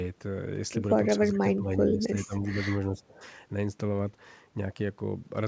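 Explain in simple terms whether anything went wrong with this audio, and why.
The speech dips from 1.17 to 2.68 s and 2.92 to 3.22 s, likely speech suppressed in double talk, as the echo canceller turned down this side's voice along with the loudspeaker echo.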